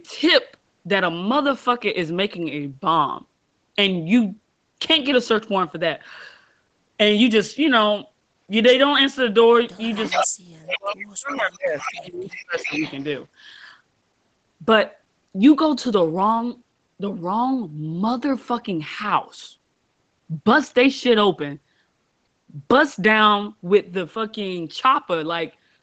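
At 10.03 s an echo leak begins. It lasts until 10.22 s. A copy of the voice returns 426 ms late, about 5 dB below the speech. More scraps follow at 10.71 to 11.06 s, 11.27 to 11.54 s, 11.79 to 11.92 s and 12.31 to 13.04 s. They sit about 10, 20, 10 and 15 dB below the speech. The delay stays at 426 ms throughout. The likely cause is a loudspeaker on one side. That side's echo canceller failed to remove part of the played voice that its microphone picked up.

From 10.12 to 12.83 s there is speech suppressed in double talk. The talker's level dips in pieces, adding up to around two seconds. The deepest drops reach roughly 35 dB. Both sides were sounding at once. The echo canceller likely could not tell its own talker from the loudspeaker echo. So it turned both down. The audio throughout has nothing above 8 kHz, from the call's microphone processing.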